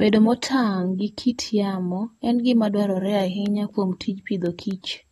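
This is a speech clip with two faults. The whole clip sounds dull and smeared, with nothing above 12.4 kHz. That points to AAC compression, likely AAC-LC at a low bitrate near 32 kbps. From 3.21 to 4.96 s, just after "yamo en gima dwarore", there are periodic USB or driver dropouts. Ticks repeat every 0.25 s, about seven in all. Each is a gap of a fraction of a millisecond filled with silence.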